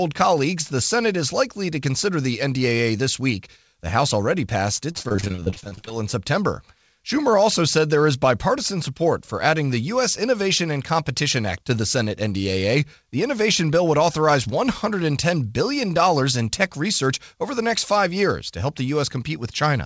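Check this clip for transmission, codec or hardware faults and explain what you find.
One transmission fault stands out, in speech carried over a call link whose band stops at 8 kHz. From 4.92 to 5.92 s, just after "already passed", there is repeated packet loss (robotic sound). A rapid run of short gaps, none longer than 26 ms, was each patched by extending the preceding audio. About 42% of that second is concealment, so the speech turns choppy, with fragments missing.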